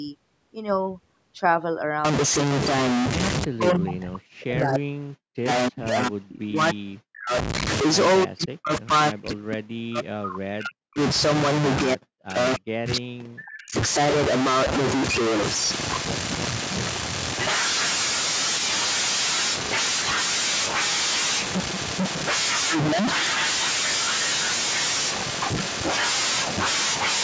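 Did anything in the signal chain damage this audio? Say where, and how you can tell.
Yes. From 2.05 s to the end, the speech carries distortion. The pauses fill with a steady hiss instead of going quiet. This points to a stuck bit, likely at the converter or in the wiring feeding it. One data bit is held fixed. About half the samples are then wrong by that bit's weight. Because that bit flips with the sign of small values, silence turns into noise.

The second fault is in call processing. The speech dips sharply at 3.45–5.48 s, 5.69–7.33 s, 8.25–8.91 s, 9.10–10.99 s, 11.85–12.37 s and 12.56–13.75 s. At the deepest points it falls by around 40 dB. This is speech suppressed in double talk, likely from the echo canceller. Both sides spoke at once. The canceller could not tell this talker from the loudspeaker echo, so it attenuated everything.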